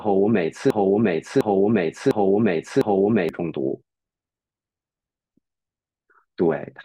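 From 0.70 to 3.29 s, the playback or stream likely stalled and kept resending the last fragment it held, a broken-record loop: one 0.70 s piece of speech repeats exactly, back to back, four times, and the speech that belonged there is lost.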